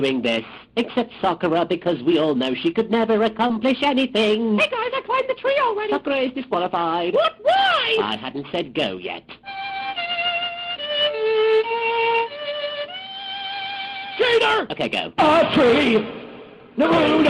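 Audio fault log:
3.47–3.51 s, short concealed packet loss: about 20 ms of audio failed to arrive in time. The receiver bridged the gap with roughly 18 ms of synthesised continuation, extending the preceding sound before blending back into the real signal, which is heard as a brief smear or wobble. A plain dropout would leave silence or an abrupt cut, and a click is a sharp spike. This gap was filled with an imitation of the sound around it, so it is softer and blurred.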